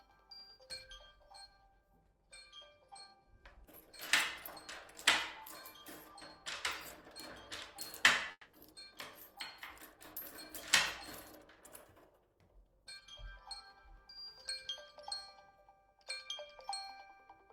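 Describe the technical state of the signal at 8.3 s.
At 8.31 s the signal breaks up in what sounds like a long network dropout, likely from audio packets never arriving, running until about 8.55 s. The receiver papers over the gap by stretching the last bit of sound into a buzzy, fading tail, then there's about 50 ms of near silence. When the audio picks back up, roughly 220 ms of the original is simply gone, so it resumes further along rather than where it stopped.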